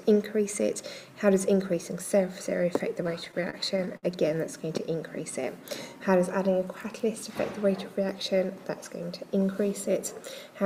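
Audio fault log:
3.07 to 4.05 s, repeated stalls (stutter): the sound halts nine times, with gaps of up to 60 ms. Packets arrived too late, so the jitter buffer kept running dry. Each gap is filled by stretching the last sound, about 155 ms in all. Nothing is lost, but the passage drags.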